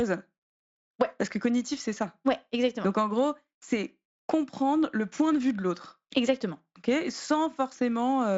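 Nothing in this speech recording stood out as a technical problem on listening.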